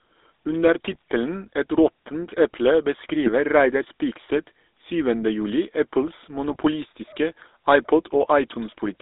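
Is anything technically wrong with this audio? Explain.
Yes. Throughout the speech there is GSM full-rate codec damage, and three short bursts of GSM bit errors occur.

GSM full-rate codec: the whole clip has a buzzy, gravelly roughness. The codec rebuilds speech from a vocal-tract filter driven by a coarse, regularly spaced pulse train, which fits a 13 kbps full-rate stream. The band is held to roughly 300 Hz to 3.7 kHz. Unlike a plain telephone band-limit, which only dulls the sound, this adds a steady grainy buzz that never lets up.

GSM bit errors: at 0.92 to 1.02 s, 3.23 to 3.29 s and 6.48 to 6.56 s, the speech breaks into brief squawks and gargling. Corrupted filter, pitch or gain values reached the decoder, so whole frames were rebuilt wrong, pointing to four or five damaged frames per burst. Dropouts or clicks leave silence or a single tick. These bursts are different: the sound turns briefly into garbled, spectrally bent noise with sudden level jumps.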